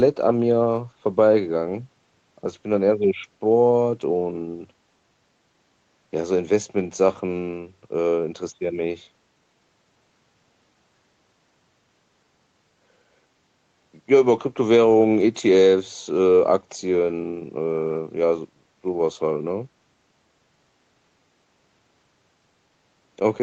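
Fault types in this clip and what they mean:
No faults can be heard.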